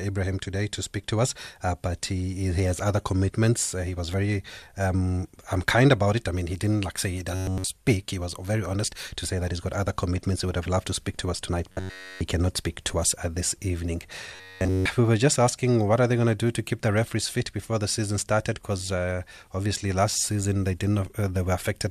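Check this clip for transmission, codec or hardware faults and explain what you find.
Three short stretches of robotic sound from repeated short buffers: 7.35 to 7.67 s after "didn't like say he", 11.72 to 12.21 s before "cannot speak to us", and 14.35 to 14.86 s before "we were just asking". The speech collapses entirely into a rigid metallic buzz at 93.8 Hz, likely from audio arriving late and a roughly 10.7 ms chunk being looped in its place.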